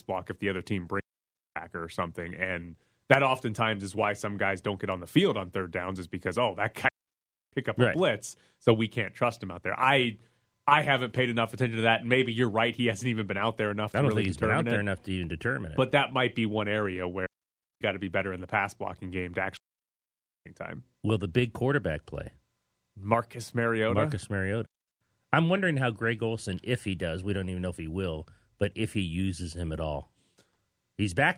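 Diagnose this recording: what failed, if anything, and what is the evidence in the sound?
Digital wireless dropout, so the radio link failed. There are five clean mutes, at 1.0, 6.88, 17.26, 19.57 and 24.66 s, lasting 0.35 to 0.89 s. The longest comes right after "pass blocking game to". There's no noise either side: the receiver lost too much data and simply muted.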